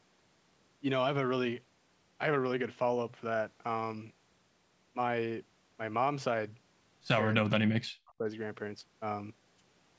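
Speech that sinks sharply from 7.39 to 8.26 s, dropping by roughly 40 dB and gated off for around 0.7 s in pieces, likely speech suppressed in double talk.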